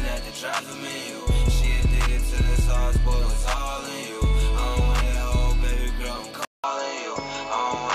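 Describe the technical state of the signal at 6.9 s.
At 6.9 s the sound sits inside a likely input switch to a poorer device, running from 6.45 s to the end. After a 0.19 s silence, a different device takes over: nothing above 7.6 kHz, a few dB quieter, with new background noise about 30 dB down. A simple filter or codec change would not bring that gap, level shift and fresh noise floor.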